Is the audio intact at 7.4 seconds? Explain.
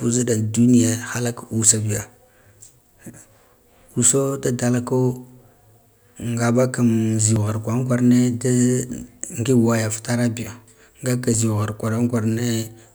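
No. At 7.36 s there is a brief skip, audio missing between chunks: a sliver of around 20 ms of the speech is gone and the material on either side is butted together with no gap, giving a small jump in the sound. The likely cause is a recorder or processor handling the signal in blocks of about 4 s and dropping around 20 ms each time it hands over from one block to the next.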